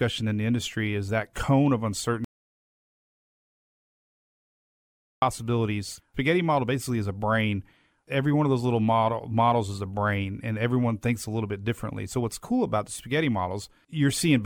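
At 2.24 s, right after "is that cone of", the speech stops dead and the clip drops into silence until 5.22 s, nearly 3 s later. This is an audio dropout to silence: with no room tone in the gap, the input was likely cut off while recording continued writing silence. On a waveform it shows as a flat line; on a spectrogram, a sharp-edged blank band where everything vanishes, then resumes abruptly mid-flow.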